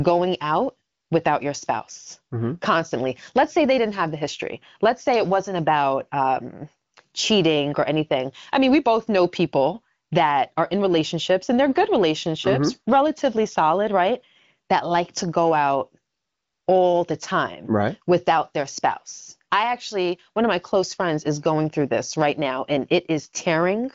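Nothing's wrong with this speech recording, which comes through the AMR wideband (HD Voice) path you'd expect, with the sound stopping at about 7.3 kHz and a clarity that fits the codec's 18.25 kbit/s mode.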